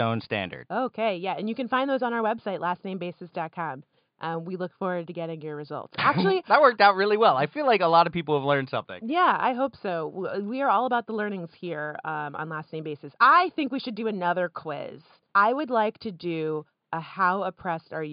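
The speech signal shows no technical faults, with only a faint room background sitting about 54 dB below the voice as part of the original recording.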